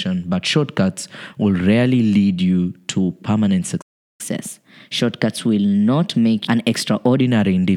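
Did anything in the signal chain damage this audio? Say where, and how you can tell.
Yes, at playback. There's a playback stall right after "lead you to permanent": the sound drops out from 3.81 to 4.21 s, likely because the player ran dry or its thread got blocked.

Right after that comes catch-up at higher speed, from 4.21 to 7.21 s. The player resamples its backlog at 1.1x, so the speech runs fast and roughly one and a half semitones sharp.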